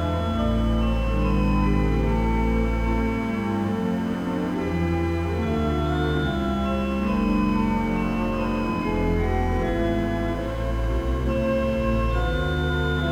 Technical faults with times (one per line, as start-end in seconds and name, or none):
none